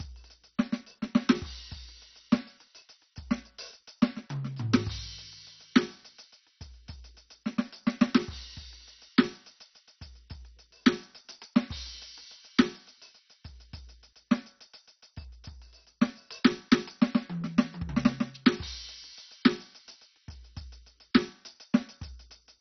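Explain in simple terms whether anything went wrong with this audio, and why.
Yes. The music was likely squeezed too hard by MP2 compression throughout, dropping everything above about 6.1 kHz, so it sounds dull, gurgly and grainy.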